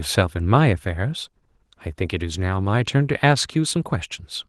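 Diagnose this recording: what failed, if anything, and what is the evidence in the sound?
Nothing has failed here as far as I can hear: the speech comes through Opus voice compression at 20 kbps in hybrid fullband mode, and the only trace of the codec is the light coding texture that's normal at that rate.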